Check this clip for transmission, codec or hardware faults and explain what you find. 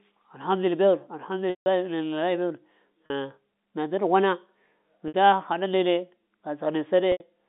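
The speech shows four dropouts concealed by packet loss with pitch repetition, at 1.50 s (160 ms), 3.06 s (40 ms), 5.08 s (60 ms) and 7.12 s (80 ms), gap lengths consistent with 20 ms packets. The receiver loops the last pitch period: the short gaps sound held and buzzy, and the 160 ms gap fades toward silence before cross-fading back. The G.711 telephone band, roughly 200 Hz to 3.7 kHz, is audible throughout.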